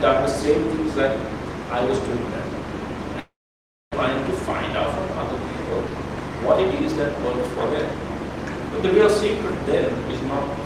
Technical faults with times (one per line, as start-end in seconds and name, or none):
3.19-3.96 long network dropout